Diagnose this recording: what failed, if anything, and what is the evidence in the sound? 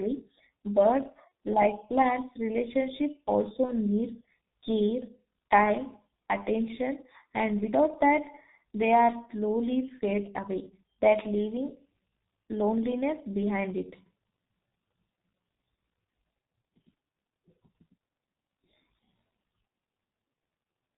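The codec stage failed. Speech sounds muffled and hoarse from start to finish, with no content above 4 kHz and smeared consonants. That points to the G.723.1 codec at a very low rate, consistent with about 6.3 kbit/s. The codec sends a coarse model of the voice in 30 ms frames and updates it slowly. Fast changes in the speech get blurred, and the damage here is heavy.

The network stage also failed, showing VoIP packet loss concealed by the speech codec. At 1.28 s and again at 3.65 s the speech is briefly stretched into a buzzy tone or coloured noise that fades. Each gap fits one lost 30 ms frame. The decoder filled the gap by repeating its last pitch and filter at falling gain. At 3.65 s the disturbance lasts until about 3.72 s because later frames rebuild from the bad state.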